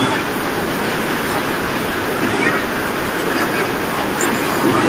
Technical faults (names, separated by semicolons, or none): echo with no canceller